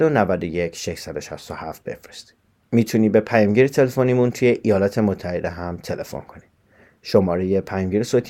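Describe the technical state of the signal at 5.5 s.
At 5.5 s the speech signal is intact, with no audible fault at that moment.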